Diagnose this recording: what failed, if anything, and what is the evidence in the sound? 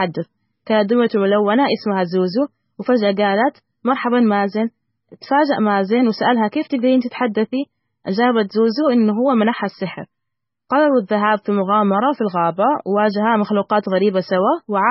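Throughout, the speech sounds watery and swirly with nothing above 5.6 kHz, likely heavy MP3 compression at a very low bitrate, which fits roughly 16 kbps.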